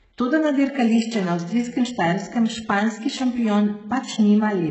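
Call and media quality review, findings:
HE-AAC compression, whole clip: heavy damage, gritty, lispy sibilants, treble present but synthetic, nothing above 8 kHz. Likely band replication at a very low bitrate, around 8 kbps. Unlike a plain low-pass, upper band is present but misaligned.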